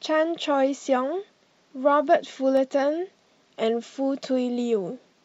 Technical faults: electrical switching spike

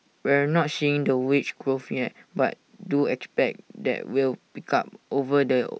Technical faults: none

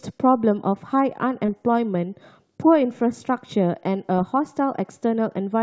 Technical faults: short concealed packet loss

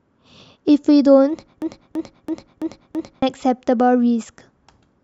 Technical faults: broken-record loop

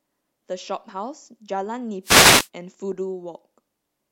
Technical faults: wireless microphone noise hit

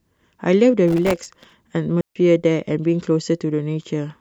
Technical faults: processor overload crackle; digital wireless dropout

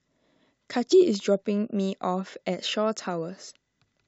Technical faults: damaged data in a compressed stream

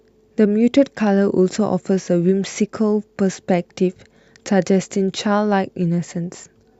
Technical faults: none

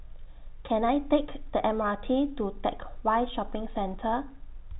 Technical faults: none

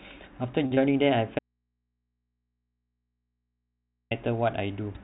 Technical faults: short stall from a late packet; short concealed packet loss; audio dropout to a faint residue

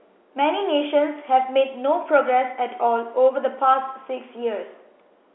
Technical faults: none

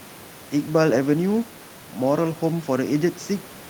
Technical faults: none

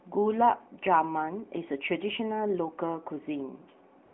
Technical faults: AMR comfort noise

